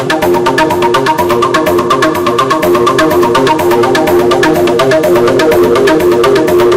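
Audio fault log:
Throughout, hard clipping: the level's pushed about 15 dB past what the stage can pass, so roughly one sample in seven gets its peak sheared flat. Those squared-off tops throw harmonics high up the spectrum, leaving a harsh fuzz on every loud moment.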